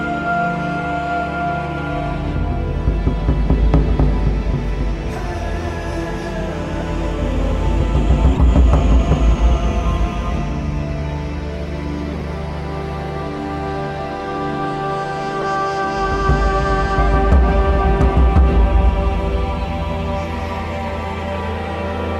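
At 2.79 s, 8.33 to 8.41 s, 12.11 to 12.22 s and 15.41 to 15.44 s, a corrupt frame decoded is heard as a short chirp or burst of noise. Flipped bits in the compressed data led the decoder to apply wrong gains or misread spectral codes across a few consecutive frames, putting energy where none belongs. The first blip is faint, peaking around -30 dBFS. The later three are much louder, reaching roughly -10 to -15 dBFS.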